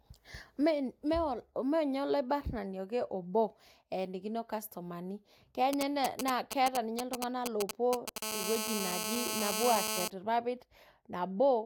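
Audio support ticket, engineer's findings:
GSM signalling bursts, 5.73–8.18 s: nearby 2G handset signalling, with its short groups of RF bursts rectified by a junction in the audio stage. Galloping dit-dit-dit of brief 217 Hz buzzes over the speech, a few dB below it.

GSM phone buzz, 8.22–10.08 s: nearby 2G handset in a call, transmitting steadily at 217 bursts per second, with the audio circuit demodulating the RF envelope. Continuous hard, raspy 217 Hz buzz, rich in harmonics, about 2 dB below the speech.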